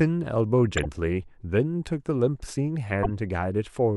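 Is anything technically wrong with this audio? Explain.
Yes. This speech clip has two corrupt frame decoded faults. The first runs from 0.77 to 0.86 s and spans a few consecutive frames. The second runs from 3.03 to 3.11 s and spans about five frames. In both, flipped bits reached the decoder, and it played the frames regardless. The misread gains and codes put energy at the wrong frequencies for about 80 to 90 ms. Each sounds like a short chirpy burst of noise, and the second is louder, peaking roughly 10 dB below full scale.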